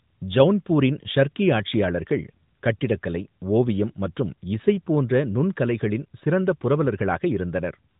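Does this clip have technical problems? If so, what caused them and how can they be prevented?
No, there are no technical faults in this speech: the band stops at about 3.8 kHz and there is a light codec colouring, as expected from an AMR narrowband mobile codec path, which fits its 12.2 kbps mode.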